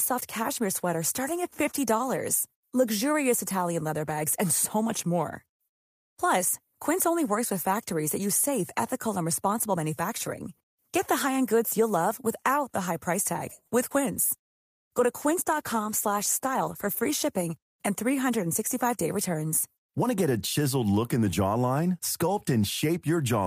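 A speech recording with a little cluster of network trouble packed into a few seconds around the middle. Right after "the high price tag", at 13.67 to 13.74 s, there's a short stall from a late packet: the next chunk of audio hadn't turned up in time, so the jitter buffer ran dry and the receiver held the last bit of sound for about 45 ms until it arrived. Nothing's actually lost, but you hear that sound hang a touch too long, and the playout delay grows by those same 45 ms. Hot on its heels, at 13.90 to 13.92 s, comes a short concealed packet loss. About 20 ms of audio simply never made it, and the receiver papered over the hole with a tiny 5 ms bit of extrapolated sound before rejoining the real signal, so you get a quick smear or wobble and the delay comes back down by roughly 15 ms. Then from 14.33 to 17.97 s there's a call bitrate drop: the bandwidth estimate sagged and the encoder got squeezed from 32 kbps down to 15 kbps, sitting at the bottom for about 2.6 s. 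At that rate the coded bandwidth shrinks from 20 kHz to 12 kHz, so the top end goes dull and the whole thing sounds a bit coarser and more muffled until it recovers. Inside that stretch, from 15.82 to 16.65 s, you've also got a jitter buffer speed-up. The buffer was holding more than it wanted, so the receiver trimmed out little pitch-period slices over and over, around 50 ms in total, and the speech plays at about 105% speed with the pitch unchanged. It sounds slightly rushed there.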